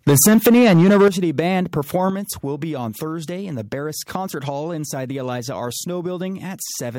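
Microphone overload runs from 0.07 to 1.08 s, with peaks pushing about 11 dB past the converter's limit and roughly a fifth of the samples flattened. The likely cause is input volume set too high, so the converter chops the tops off the loudest syllables. That gives them a harsh, crackling, gritty edge. At 0.1 s the microphone volume is stepped down by about 2 dB, a small sudden drop in level that does little to stop the distortion.

At 1.08 s, right as that stretch ends, a second step down of about 9 dB lands. Voice and background fall together in one abrupt notch. This is likely the call software cutting the device gain after the sustained clipping. The drop is not quite enough, because microphone overload returns briefly from 1.38 to 1.40 s, about 4 dB over with roughly 5 percent of samples clipped, and adds a short crackle on a peak.

A third step down of about 5 dB follows at 2.1 s, just before "will be on". 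Voice and background drop in level again, in one step.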